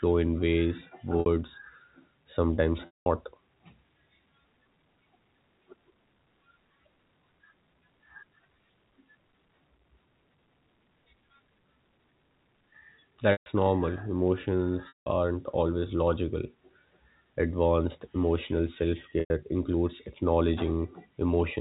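Packet loss with pitch repetition occurs at 1.2–1.26 s after "in ways", 2.86–3.06 s, 13.32–13.46 s, 14.88–15.06 s before "aren't always logical", and 19.2–19.3 s after "emotional self". Gaps of 60–200 ms are bridged by repeating the last pitch period, giving a held buzz that fades out on the longer drops, all over band-limited G.711 telephone audio.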